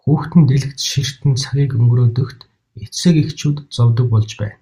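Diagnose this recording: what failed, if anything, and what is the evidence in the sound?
Nothing stood out on listening to the speech, and no stage of the recording or playback chain shows a failure.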